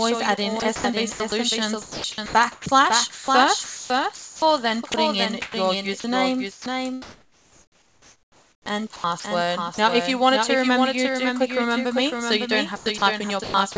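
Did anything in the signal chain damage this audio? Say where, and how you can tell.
Yes. A doubled audio track runs throughout: a full-band copy about 5 dB quieter trails by about half a second, likely a second capture path. No decay or room colour, so it isn't reverb.

From 0.60 to 9.78 s and 12.76 to 13.76 s, the sound is chopped by the voice detector, likely in call processing. Quiet edges drop into synthetic comfort noise, unlike packet loss.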